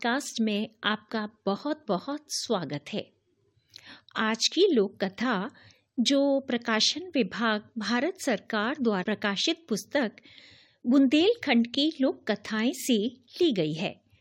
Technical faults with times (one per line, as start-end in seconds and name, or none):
9.02-9.04 compressed frames skipped